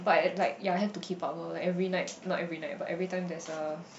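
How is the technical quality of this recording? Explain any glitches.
The technical quality of this recording holds up, with no glitches to explain.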